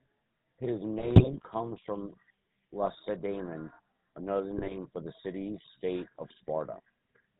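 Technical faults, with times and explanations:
throughout: GSM full-rate codec, plainly audible. Band-limited below 4 kHz with a buzzy, gravelly roughness from pulse-train excitation, consistent with 13 kbps coding.
0.98–1.46 s, 2.84–2.98 s, 4.58–4.77 s: GSM bit errors. Corrupted filter, pitch and gain parameters distort frames into squawks and gargling; the last burst ends just before "for the city state".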